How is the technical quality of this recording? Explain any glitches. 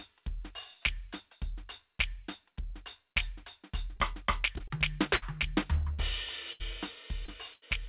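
The recording has repeated dropouts from packet loss, concentrated in its second half, on top of a call-codec band limit: nothing reaches above 4 kHz, which fits G.711 mu-law as used on a narrowband call path.

Short concealed packet loss occurs at 3.96–4.00 s, 4.58–4.62 s, 4.68–4.72 s and 7.26–7.30 s, each replacing about 20 ms of audio. The receiver extends the preceding sound across the hole and crossfades back into the real signal, so each one comes through as a quick smear or wobble in the music. Unlike the bursts, the gap is short enough that little seems lost.

A burst of packet loss hits at 5.16–5.24 s, 5.94–6.01 s, 6.52–6.62 s and 7.54–7.64 s, with about 60, 40, 80 and 80 ms missing respectively. Here the concealment runs longer, repeating the last sound while fading it, so it turns into a held buzz or dwindling hiss. What sets these apart from the short losses is the audible jump afterwards: the music resumes further along, with a chunk simply gone.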